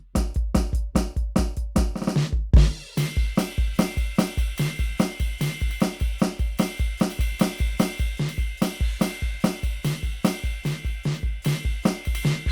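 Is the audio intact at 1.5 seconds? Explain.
Yes, the music at 1.5 seconds plays through intact, with no dropout, click or other fault at that moment.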